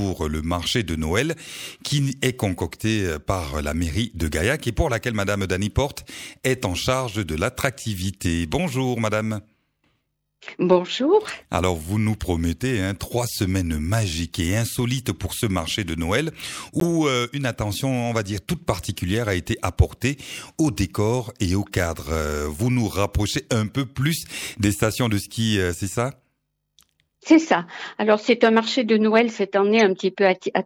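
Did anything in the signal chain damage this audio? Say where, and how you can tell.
Yes. The damage sits at the codec stage: corrupt frame decoded, twice. At 16.80 to 16.85 s and again at 29.79 to 29.81 s, a compressed frame with damaged bits was passed to the decoder and played instead of being concealed. Misread gain and spectral codes drop energy at the wrong frequencies, so each event is a short, loud chirp-like burst, peaking around -5 dBFS, that ends when clean frames resume, the span suggesting a couple of frames each.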